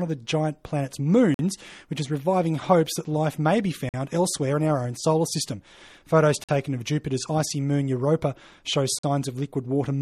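Gaps between chunks break the sound at 1.34, 3.89, 6.44 and 8.99 s, each a hard-edged hole of about 48 ms recurring every 2.5 s of audio. Silence was left at each chunk join. The waveform drops abruptly to flat, and the spectrogram shows clean vertical blank stripes.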